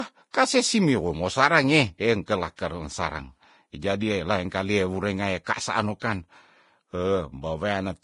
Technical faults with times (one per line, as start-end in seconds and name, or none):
0.00-8.04 Vorbis compression
0.31-0.34 pre-echo